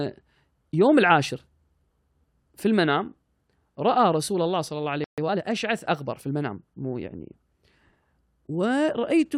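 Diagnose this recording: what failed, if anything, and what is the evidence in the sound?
A playback stall, likely the player running out of buffered data or having its output thread blocked, interrupted the stream at 5.04 s. The speech cuts to silence for 137 ms, until 5.18 s, then picks up again.

Playback then performed a time-compressed catch-up, working off the backlog left by the stall by cutting out small pieces of audio and cross-fading the joins. From 5.18 s to 5.44 s the speech runs 1.5 times faster at its normal pitch.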